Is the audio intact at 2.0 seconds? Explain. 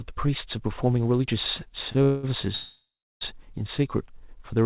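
Yes. The moment at 2.0 s falls in a short stretch of undisturbed sound squeezed between two timing faults, though the passage around it is not intact.

Just before, from 1.92 to 1.97 s, a sound is held slightly too long, with a slight buzz or dip. This is a short stall from a late packet. One packet arrived late, the jitter buffer briefly ran dry, and the receiver stretched the last sound for about 27 ms until the packet came in. Playback then resumed from the same point, so nothing is lost, but everything after it plays 27 ms later.

Right after, from 2.03 to 2.25 s, the sound freezes into a fading buzz or hiss for about 203 ms. It never drops to silence, and then picks up where it stopped. This is a call audio freeze, likely caused by packets held up in transit. The jitter buffer emptied and the receiver kept extending the last sound, inserting a gap of about 0.2 s without removing anything. 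Through both events the call path keeps the audio's usual dull, band-limited sound, with nothing above 4 kHz.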